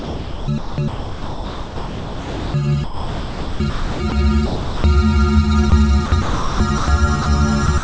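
From the start to 2.54 s the sound keeps breaking up, with quiet stretches swapped for synthetic hiss. That's sound chopped by the voice detector, likely the sender gating in and out. It happens again from 2.84 to 4.12 s.

From 4.46 to 4.84 s the sound drops by the voice detector and gives way to steady comfort noise, likely because the sender treated it as background. Shorter dropouts of the same kind follow at 5.70 s and from 7.22 to 7.26 s.

Chopping returns from 6.06 to 6.88 s and again from 7.66 s to the end. The call codec's band limit also holds everything below 8 kHz.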